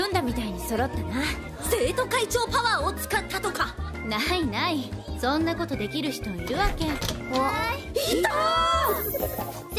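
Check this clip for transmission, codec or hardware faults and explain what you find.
The signal holds steady throughout, with no audible fault anywhere in the clip.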